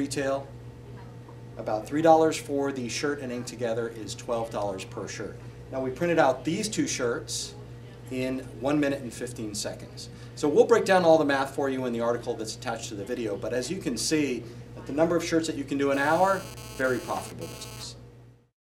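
From 15.94 s to 17.84 s the audio carries GSM phone buzz, a hard, raspy 217 Hz tone with many harmonics, about 17 dB below the signal. A nearby 2G phone's transmit bursts are rectified in the audio circuitry, and the brief stretch fits a data transfer.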